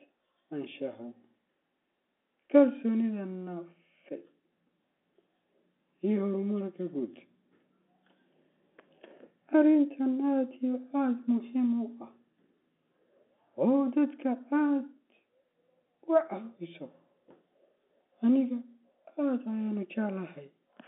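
No technical faults are present: the speech comes over a G.711 mu-law telephone path at 64 kbps, with the band running from about 250 Hz to 3.5 kHz and nothing above 3.8 kHz, as expected for a fixed-line call.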